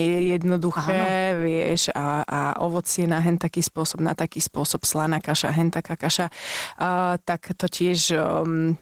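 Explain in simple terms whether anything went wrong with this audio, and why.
Throughout, the speech sounds muffled, slightly hoarse and a little robotic. That is Opus voice compression: to save space, the codec models the voice roughly and codes the highest frequencies with a separate, cruder layer, so fine detail and natural texture are lost.

Three sharp, isolated clicks are heard at 0.63, 2.77 and 7.44 seconds. These are likely dropped samples: a tiny sliver of sound, about a tenth of a millisecond, went missing, so the waveform jumps abruptly and snaps audibly.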